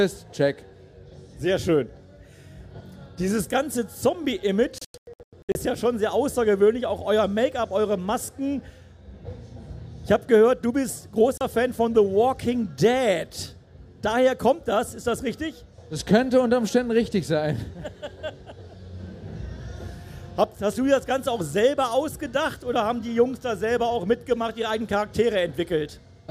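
From 4.78 s to 5.56 s the clip shows a digital broadcast dropout. The receiver stopped getting valid frames and muted its output until good ones returned. Here the muting comes in a scatter of short holes, about 480 ms of sound missing in total spread over 768 ms, the longest single gap 96 ms. This fits roughly fifteen lost frames of 32 ms each. A second dropout at 11.38 s removes 32 ms, consistent with a single lost frame. Whatever was sent during those gaps is gone.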